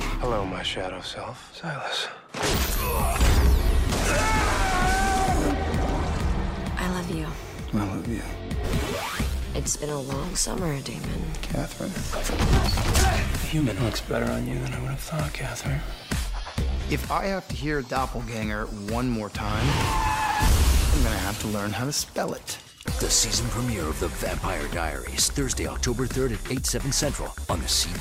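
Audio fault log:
3.88–13.91 s: periodic USB or driver dropouts, with about seven ticks 2.0 s apart, each a roughly 2 ms silent gap where the bus or driver briefly stalls.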